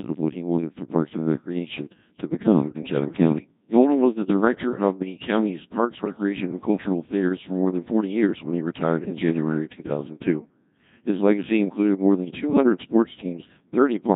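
A very low-rate digital voice link carries this speech from start to finish: it passes through the Codec 2 vocoder at 1.6 kbit/s, which transmits only pitch, voicing, energy and a coarse spectral envelope for each frame and then rebuilds the voice from summed sine waves at the receiver. Because the original waveform is never sent, the damage is heavy. The voice sounds robotic and buzzy throughout, with a synthetic timbre in place of natural detail. On top of that, bit errors on digital voice radio strike between 6.05 and 6.23 s, with something like a few percent of bits flipped. At so low a rate each corrupted bit distorts the pitch, level, voicing or tone colour of a whole frame, and this short burst sounds like roughly three frames going wrong. There the voice lurches in pitch and loudness and breaks into a brief warbling, bleeping stretch of gibberish before the decoder settles again.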